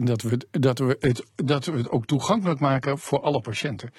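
At about 1.0 s, right after "dat we dat we", the speech drops to a lower bitrate in the adaptive stream. The connection slowed and the player switched to a cheaper version. It stays there until the end. The change is sudden, with no gap. The treble thins, and nothing remains above about 11.8 kHz. Codec artefacts rise. The sound points to a switch from AAC-LC at 96 kbit/s to low-rate HE-AAC, around 16 kbit/s.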